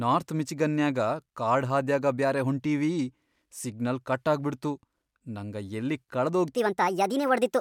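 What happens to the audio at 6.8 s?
At 6.8 s the speech is inside a section at the wrong speed, running from 6.55 s, just after "ನಂಗ ಯಲ್ಲಿ", to the end of the clip. Playback runs 1.41 times too fast, likely from a mismatched clock, so the voice sounds hurried and about seven semitones higher.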